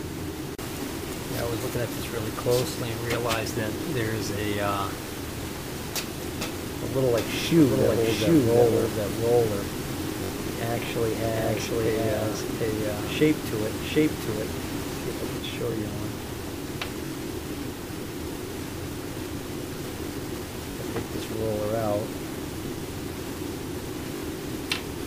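A doubled audio track runs from 7.18 s to 15.38 s. A second full-band copy trails about 0.7 s behind at roughly equal level, with no decay or room colour, and it cuts in and out abruptly. This is likely a slow second capture path or misaligned edit.

Repeated buffers occur at 10.24, 15.72, 17.07, 20.72, 22.68 and 24.17 s. When audio arrived late, the device replayed its last 21.33 ms buffer, which fits a 1024-sample buffer. This happens up to three extra times, producing brief hard-joined stutters.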